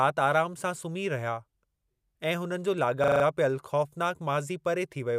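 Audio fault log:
3.04 to 3.24 s, system hang loop: the playback system stalled while the sound hardware kept cycling through the same 40 ms stretch of its ring buffer. One fragment of speech repeats exactly five times before normal playback resumes. At a loop rate of 25 Hz it falls between a steady buzz and a slow stutter, and is heard as a rapid, rattling judder. Little or no speech seems to be missing once playback picks up again.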